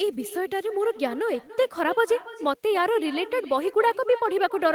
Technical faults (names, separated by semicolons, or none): echo with no canceller